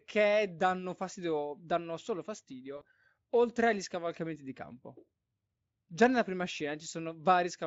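At 2.77 s the speech drops out for about 80 ms, through 2.85 s, and the gap is papered over by VoIP packet loss concealment in the speech codec. Roughly 40 ms of audio went missing, which fits two lost packets. The decoder repeats its last pitch and vocal-tract filter while the gain steps down, so the lost sound comes out stretched and fading. The recovery also lags, because each rebuilt frame depends on the one before it. The Speex coding underneath adds only light coding damage.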